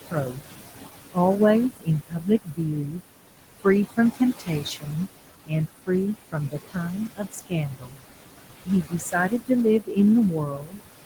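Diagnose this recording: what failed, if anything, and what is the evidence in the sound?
Noise suppressor artifacts run throughout, a call-processing fault. The room noise, sitting about 11 dB below the speech, is pulled down by about 19 dB in the gaps and swells back under the speech. The suppressor re-estimates each band frame by frame.

Speech cut by the noise suppressor, also in call processing, comes in seven stretches: 0.03–0.52, 1.77–3.01, 3.61–4.94, 5.46–5.89, 6.32–8.02, 8.65–9.98 and 10.31–10.81 s. The suppressor mistakes quiet speech for noise and drops it by about 15 to 21 dB, so soft syllables sound swallowed.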